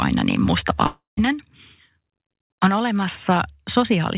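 Just after "aina niin", from 0.86 to 1.19 s, the speech gives way to a fading buzzy continuation of the last sound, then about 160 ms of silence before it resumes with a piece missing. This is likely a long network dropout, distinguished from a brief packet-loss click by the audible fade-and-gap within the band-limited, 4 kHz-topped call audio.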